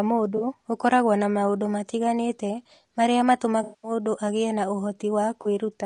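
Low-delay AAC compression affects the whole of this speech recording. The voice is plainly rough and grainy, with noise filling the gaps between harmonics and a thin, synthetic top band. The likely cause is AAC-ELD's short frames at a bitrate around 32 kbps, too few bits to resolve pitch detail. AAC frame loss with concealment appears at 0.37 to 0.43 s, just before "ũkoragwo na maũndũ matiganĩte", and again at 5.41 to 5.47 s. Each is a brief smeared, phasey patch of about 40 ms where the decoder rebuilt the missing audio from the last good spectrum, which fits two lost frames. The longest gap runs from 3.63 to 3.91 s, between "na maũndũ matiganĩte marĩa" and "agĩe na". There about 200 ms of lost audio is filled in, then dips toward silence and fades back up.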